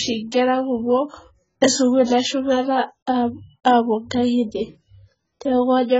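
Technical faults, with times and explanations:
Throughout, AAC compression: the speech sounds dull and smeared, with a warbling, fizzy texture on sustained vowels and sibilants, and the high end is cut off. The likely cause is heavy AAC-LC coding at a rate that fits about 12 kbps, quantising each frame's frequency lines so coarsely that bands drop out or are filled with substitute noise. A spectrogram shows a hard flat ceiling at a lowered cut-off, with patchy holes and blurred smears beneath it.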